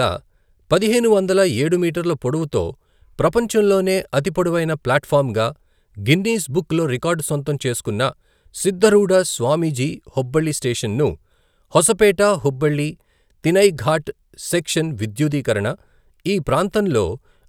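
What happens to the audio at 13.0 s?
Nothing goes wrong at 13.0 s; the speech carries on intact through that moment, with no dropout, click or distortion to be heard.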